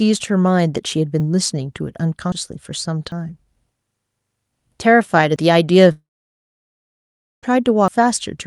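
You'll hear little forward jumps in the speech at 1.2, 2.32, 3.12 and 5.36 s, and again at 7.88 s. Each is likely a dropped buffer (overrun), with a chunk of audio overwritten before it was read. The gap is around 40 ms, but closer to a tenth of a second at 2.32 and 7.88 s.

From 5.91 to 7.45 s there's a long network dropout, likely. A brief fading buzz carries on the last sound, then roughly 1.4 s of silence, and the speech picks up further along with about 1.6 s of it gone.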